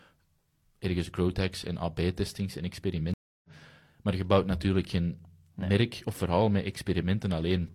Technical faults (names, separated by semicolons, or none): stream reconnect